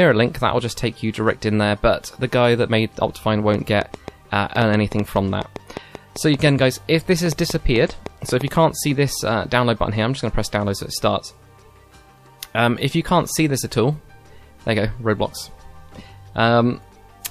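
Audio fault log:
3.54–8.49 s: train of clicks. About thirty sharp, similar pulses tick over the sound at roughly five per second, unevenly spaced. They stand about 10 dB above the signal. The likely cause is interference from nearby equipment or a faulty connection or power supply injecting pulses.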